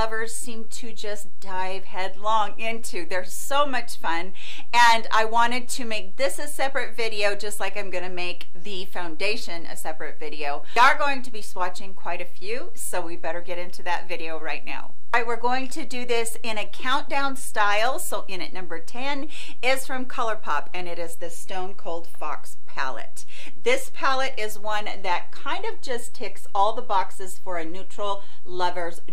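A constant DC offset sits on the signal from start to finish: somewhere upstream, the chain adds a fixed voltage so the whole waveform rides about -16 dBFS away from the zero line. The DC offset cannot be heard as a tone, but it eats into headroom, so peaks on one side reach full scale sooner and can clip earlier. It also leaves a steady block of energy at 0 Hz, at the very bottom of the spectrum.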